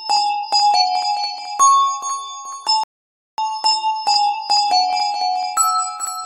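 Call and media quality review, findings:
Rebuffering stall, 2.84–3.38 s: sound drops to silence for about 0.55 s, then resumes exactly where it stopped, nothing skipped. Probable component: playback buffer underrun in player or streaming client, as download fell behind playback. Waveform: flat silent gap. Spectrogram: clean blank column. Timeline extended by 546 ms.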